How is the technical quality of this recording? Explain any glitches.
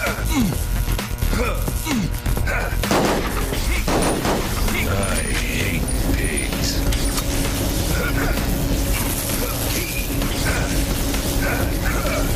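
The technical quality of this recording is sound, with no glitches to explain.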